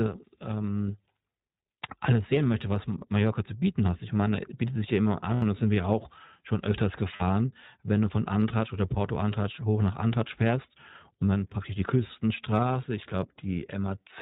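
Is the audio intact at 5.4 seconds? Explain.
No. From 5.34 to 5.43 s there are lost iLBC frames, an 80 ms gap that fits four 20 ms frames going missing. It falls just after "bietet sich ja immer" and just before "das sind wir auch". The decoder fills the hole by repeating the last pitch cycle, mixed with noise. So instead of real speech you hear a brief held, slightly buzzy vowel. iLBC codes each frame on its own, so the voice comes back clean at once.

The whole clip also passes through the iLBC codec, at 15.2 kbps with 20 ms frames. The damage is plainly audible. This narrowband VoIP codec drops everything above 4 kHz, so the speech sounds muffled and lacks sibilant air. Coding each frame's excitation independently leaves the voice clear but rough and synthetic. That colours the moment around 5.4 s too.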